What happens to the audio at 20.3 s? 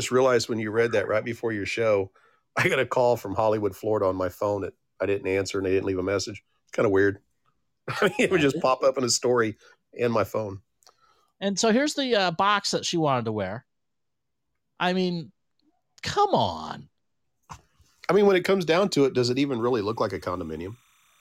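At 20.3 s, timecode bleed is under the speech. It starts at 19.59 s, just after "it does it even", and runs to the end of the clip at 21.21 s. Linear timecode from a nearby track or cable has leaked into the audio path. Its square wave flips between roughly 1 kHz and 2 kHz, a pattern that fits 29.97-frame code, giving a faint chirping warble about 40 dB down. The constant switching between two pitches sets it apart from a single steady whine or hum.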